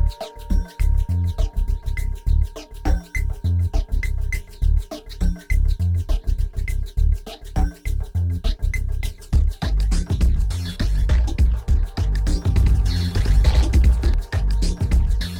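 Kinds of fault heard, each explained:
doubled audio track: From 12.56 to 14.14 s the sound is heard twice, with a second full-band copy trailing about a tenth of a second behind at roughly equal loudness. It has no decay and cuts in and out abruptly, likely from a slower capture path mixed in.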